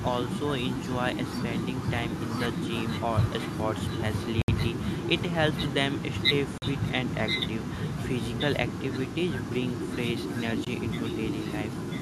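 From the start to the end at 12 s, an echo leak, likely from a far-end loudspeaker whose echo canceller let some pickup through, returns the speech just under a second late, roughly 10 dB quieter. At 4.42 to 4.48 s, 6.58 to 6.62 s and 10.65 s, a Bluetooth stall, likely a headphone buffer running dry during interference, cuts the audio to silence for 66, 42 and 19 ms before it resumes.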